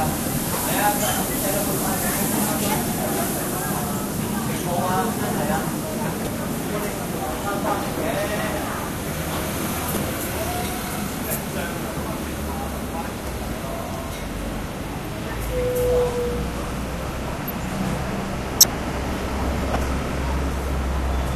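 Corrupt frames decoded at 6.25–6.27 s, 9.94–9.97 s, 18.60–18.66 s and 19.74–19.76 s. In each, one or two damaged compressed frames were played anyway. Misread gains and codes push energy to wrong frequencies, giving short chirp-like noise bursts, the one near 18.6 s almost full scale.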